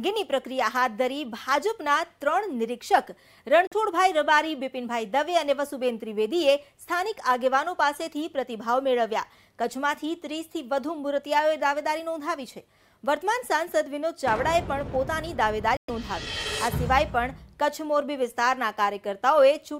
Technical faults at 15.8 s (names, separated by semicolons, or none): Bluetooth dropout